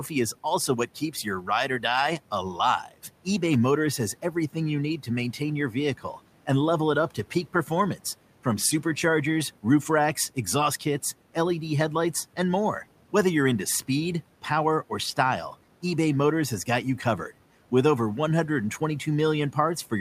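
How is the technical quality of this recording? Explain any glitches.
The recording has one glitch, near the start. Speech cut by the noise suppressor, 0.87 to 1.47 s, just after "is also": the suppressor mistook quiet parts of the speech for background and turned them down with it, by about 11 dB at the deepest. Around 150 ms in all sounds swallowed and faint. The room noise sits about 23 dB below the speech and belongs to the recording itself.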